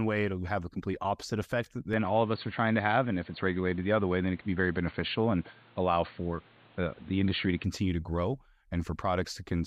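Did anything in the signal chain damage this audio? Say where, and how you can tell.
Yes. At the capture device, from 1.93 to 7.64 s after "a complete opposite effect", the spectrogram cuts off above 4.5 kHz and gains faint noise, likely an input switched to a poorer device.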